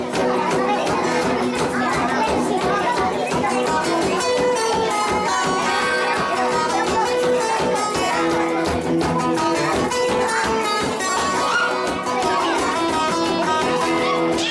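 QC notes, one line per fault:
Throughout: wrong sample rate. Everything runs 1.5 times too fast and sits about 7 semitones high, speed and pitch shifted together with no conversion, which fits audio recorded at 16 kHz being played back at 24 kHz.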